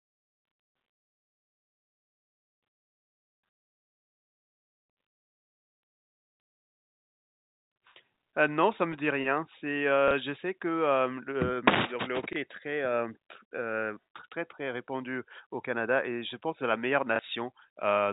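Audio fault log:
10.08–10.11 s, 12.33–12.36 s, 17.16–17.19 s: packet loss with last packet repeated. Each 30 ms gap, consistent with one lost 30 ms packet, is filled by replaying the previous packet. The copy seldom lines up with the speech's pitch cycle, so each repeat sounds like a small blip.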